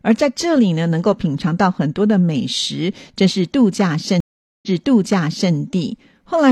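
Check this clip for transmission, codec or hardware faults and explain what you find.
One transmission fault is present. From 4.20 to 5.52 s there is a stream reconnect: the connection dropped and the decoder restarted, leaving 0.43 s of silence before the speech resumes about 0.9 s earlier, repeating that stretch.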